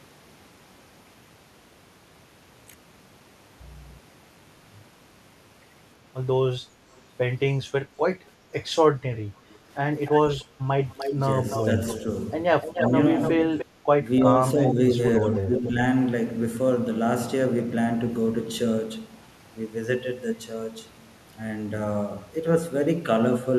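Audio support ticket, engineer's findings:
Echo leak. Delayed copy of the far-end voice comes back into the send path. It is faint at 6.95–7.01 s, with about 318 ms delay. It is clearly audible at 10.06–12.03 s, roughly 10 dB under the talker, with about 298 ms delay. At 12.62–13.65 s it is near talker level, again about 298 ms late. Likely cause: the far end is on a loudspeaker and its echo canceller isn't fully subtracting the loudspeaker signal its mic picks up, so the residual is returned to us.

Background gated by the echo canceller. Room tone dips briefly at 10.45–10.57 s, about 6 dB down for around 100 ms, then recovers. It lands inside the echo stretch. The canceller's suppressor clamped the mic hard while the loudspeaker was active and took the ambient floor down with it. The gain came back once the canceller released.

Speech suppressed in double talk. Near-end voice ducks while both sides talk. 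There's a shallow dip over 11.15–12.08 s, about 5 dB totalling roughly 150 ms. A short dip at 12.89–12.97 s is similar in depth. The heaviest is at 13.64–15.77 s, roughly 10 dB down, around 700 ms in total, in pieces. Likely cause: the canceller couldn't tell the local talker from loudspeaker echo during overlap and attenuated both.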